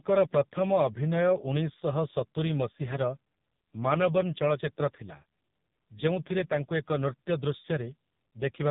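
AMR narrowband mobile codec damage runs throughout: nothing passes above 3.8 kHz, and the heavily buzzy, synthetic speech fits one of AMR-NB's lowest bitrate modes, around 5.15 kbps.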